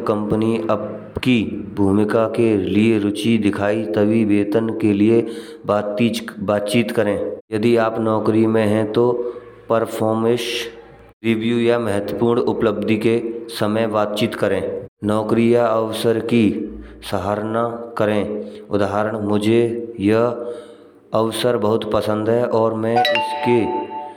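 No technical faults can be heard anywhere in it.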